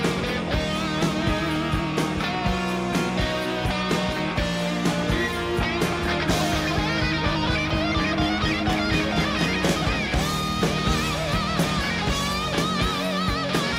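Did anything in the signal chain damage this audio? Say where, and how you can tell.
Yes. Regular small ticks recur about every 1.02 s from 0.54 s to 12.84 s, roughly fifteen in all. Each is a gap of about a millisecond where the signal drops to silence, audible only while sound is present. This is periodic USB or driver dropouts at the driver or buffer stage: something blocks the USB bus or audio driver on a fixed schedule, and each stall leaves a short silent hole.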